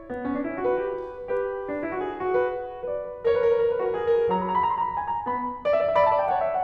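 No technical faults can be heard in this music clip.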